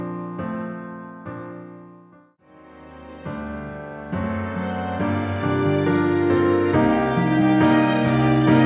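Nothing is technically wrong with this audio, and no faults can be heard at any point.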